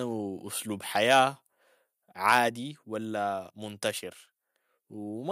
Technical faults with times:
1.11-1.19 microphone overload
1.52 audio missing between chunks
2.29-2.39 microphone overload
2.49 microphone volume stepped down
3.50 audio missing between chunks

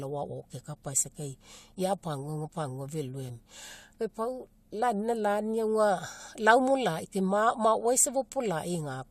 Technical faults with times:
3.28 compressed frames skipped

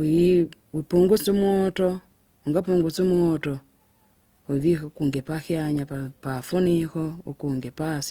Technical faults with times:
0.00-8.11 Opus compression

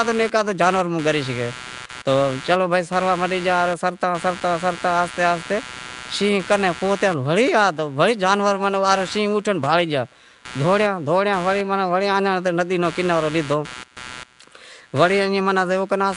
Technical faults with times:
0.00-16.16 computer activity noise
0.00-16.16 Nellymoser compression

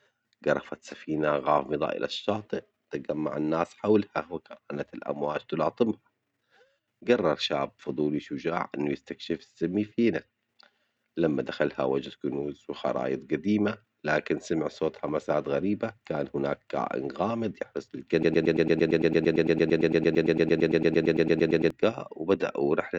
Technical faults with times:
18.23-21.70 broken-record loop

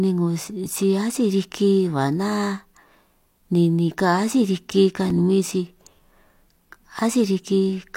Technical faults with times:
5.10 block of digital silence

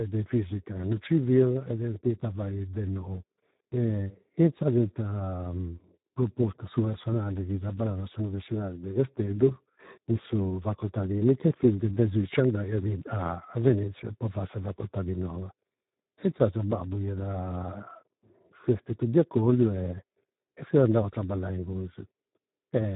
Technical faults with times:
0.00-22.96 Speex codec

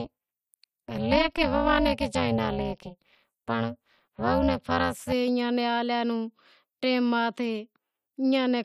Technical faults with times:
0.00-5.12 overlap-add ripple

